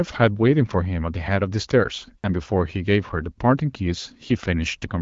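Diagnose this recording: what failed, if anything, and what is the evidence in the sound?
Nothing stood out on listening, and the speech sounds as expected for an AMR wideband (HD Voice) path running at 12.65 kbit/s.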